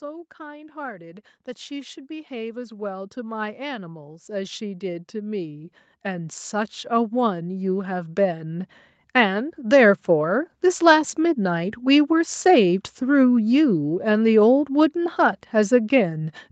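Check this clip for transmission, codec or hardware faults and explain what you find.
One fault stands out: automatic gain rising, across the sound carried over a call path whose top end stops near 8 kHz. From 0.05 s to 10.02 s, the automatic gain control judges the input too quiet and steadily raises its gain by about 20 dB. Speech and background noise swell together over those ten seconds rather than changing abruptly.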